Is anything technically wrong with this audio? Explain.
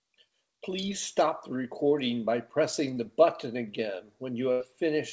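Yes, the speech has two dropouts where audio failed to arrive in time and the receiver had to cover for it, one brief and one longer.

A short concealed packet loss occurs at 2.94 to 2.98 s. About 20 ms of the signal never reached the decoder in time, so the receiver invented roughly 19 ms to bridge the hole by extending the preceding sound, pitched if voiced or as shaped noise if not, then crossfaded back into the real audio. It comes across as a momentary smear or wobble.

A burst of packet loss follows at 4.52 to 4.62 s. Here about 80 ms went missing in a row, too much for a seamless patch. The receiver stretched the last sound for roughly 79 ms while turning it down, producing a held buzz or fading hiss, and the speech then resumes further along with that stretch gone. Throughout, the call codec's band limit leaves nothing above 8 kHz, consistent with G.722 on a WebRTC call path.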